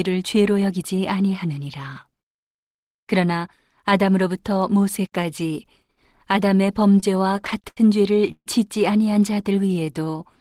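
From 6.88 to 7.78 s the speech shows repeated stalls (stutter). Ten short breaks are spread across this span, the longest about 79 ms, and together they add roughly 177 ms, about a fifth of the stretch. Packets were arriving late or slower than playback, so the jitter buffer kept draining, and each time the receiver held the last sound until more data came. Nothing is lost, but the passage drags and hiccups.

At 8.32 to 8.47 s there is a call audio freeze. The sound hangs for about 142 ms, first as a held continuation of the last sound and then going quiet for around 60 ms before the speech resumes where it stopped. The likely cause is packets delayed in transit emptying the jitter buffer, with the receiver filling the wait and adding that much delay rather than dropping anything.

From 9.34 to 10.18 s a jitter buffer slow-down stretches the speech. The receiver rebuilt its reserve by repeating single pitch periods and fragments of pauses, inserting about 128 ms, so this section plays at roughly 86% speed. 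Pitch stays the same, but sounds are drawn out and the delivery feels sluggish.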